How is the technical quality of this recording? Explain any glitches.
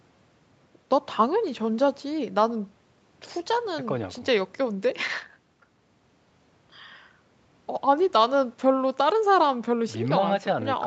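No glitches to speak of here, just speech with a normal call sound, its top end stopping at 8 kHz the way an Opus call link tends to leave it, and nothing else getting in the way.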